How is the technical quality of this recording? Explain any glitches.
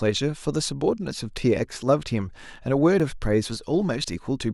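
The speech has three audible glitches. At 1.11 s, 3.00 s and 4.04 s the sound jumps forward, likely from a dropped buffer (overrun). About 10 ms, 10 ms and 30 ms go missing before the two ends are joined.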